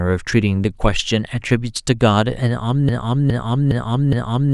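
From 2.89 s to the end, a 413 ms fragment repeats four times in a broken-record loop. The playback likely stalled on that fragment. Unlike a stutter, each repeat is identical and the new audio never arrives.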